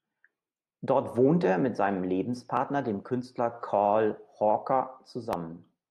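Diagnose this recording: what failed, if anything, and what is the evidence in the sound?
Nothing failed at any stage of this speech recording.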